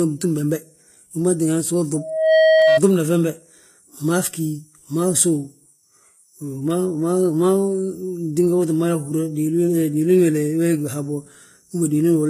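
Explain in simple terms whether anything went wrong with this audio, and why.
The whole clip sounds smeared and dull, with nothing above about 14.9 kHz. This is likely transcoding between lossy codecs: it was compressed twice, and both rounds of damage add up.

From 1.94 to 2.80 s there is a loudspeaker feedback squeal. A microphone picked up its own speaker, and a 635 Hz tone swelled over roughly 0.4 seconds until it was louder than the speech.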